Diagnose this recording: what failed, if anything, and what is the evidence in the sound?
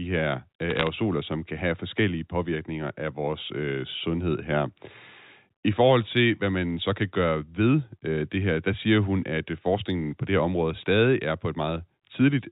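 A burst of sharp ticks and crackle sits over the speech from 0.70 to 0.87 s, between "her øh" and "som kan have forskellige". These are bit errors on a digital phone line: flipped bits corrupt individual G.711 mu-law samples, and hits on sign or high-order bits jump the waveform, at a rate well under one percent.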